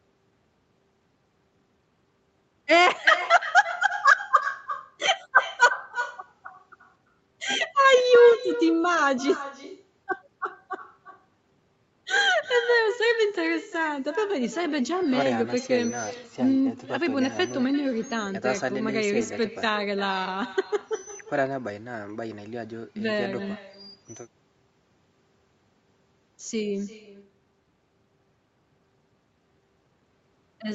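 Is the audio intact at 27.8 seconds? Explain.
No. At 27.8 seconds, as throughout the clip, there is echo with no canceller: the far end's microphone picks up its loudspeaker and nothing removes it. The speech returns about a third of a second later as a thinner copy roughly 13 dB quieter.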